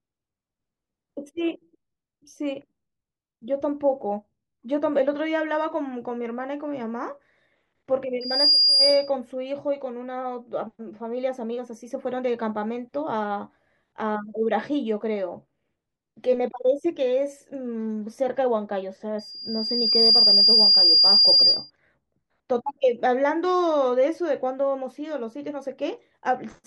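Loudspeaker feedback squeal at 8.2 to 9.1 s and 19.2 to 21.7 s: the microphone-speaker loop exceeds unity gain at 4.8 kHz, swelling into a tone roughly 10 dB above the speech.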